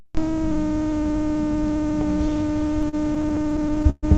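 From 2.47 s to 4.05 s the audio suffers repeated stalls (stutter): playback halts 19 times across that span, and each halt is bridged by extending the last sound, with the longer waits fading out, up to about 129 ms at the worst. About 330 ms in total, roughly a fifth of the span, is filled this way. Nothing is lost, but the sound drags and hiccups. The cause is packets arriving late or too slowly, repeatedly draining the jitter buffer.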